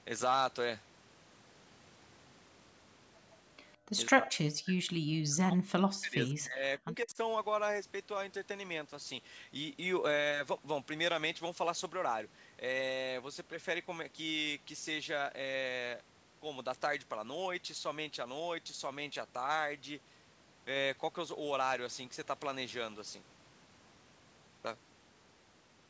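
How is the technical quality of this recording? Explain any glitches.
The speech is marred by echo-canceller action between 3.77 and 7.17 s. The band stops at 8 kHz, which fits a 16 kHz call path.

Background gated by the echo canceller occurs from 3.77 to 3.83 s. While the far-end loudspeaker played, the canceller clamped the microphone, and the room tone drops by about 23 dB for roughly 70 ms before snapping back when the suppression releases.

Speech suppressed in double talk follows at 4.11 to 4.39 s, 4.61 to 6.64 s and 6.84 to 7.17 s. The speech falls away by around 40 dB in the first two spans and around 15 dB in the last, likely because the canceller mistook overlapping near-end talk for loudspeaker echo and attenuated both.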